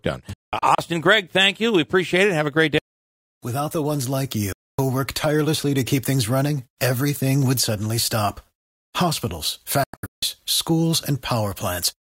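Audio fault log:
0.33–0.79 s, digital broadcast dropout: the receiver mutes several times, about 256 ms of silence in holes spread over 448 ms (longest 192 ms), which fits eight lost 32 ms frames.
4.52–4.79 s, digital broadcast dropout: one clean 256 ms mute.
9.84–10.23 s, digital broadcast dropout: 320 ms lost in holes over 384 ms, longest 160 ms.
Each hole starts and ends with a 3 ms fade into silence, with no hiss, so this is not analogue fading. The lost audio is not replaced.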